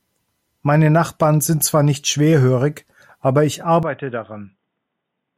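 Input switched to a poorer device at 3.83 s, right after "nicht schwerhörig aber ich", lasting to the end of the clip. The speech abruptly turns dull and boxy, with nothing above 3.7 kHz, and drops roughly 10 dB in level, along with a faint new noise floor far below the speech. There is no gap at the switch. The likely cause is the recording input jumping mid-take to a narrower-band microphone or a headset's call profile.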